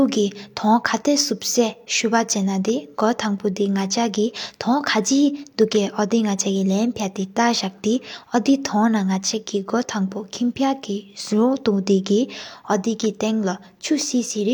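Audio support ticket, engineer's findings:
No faults found on listening.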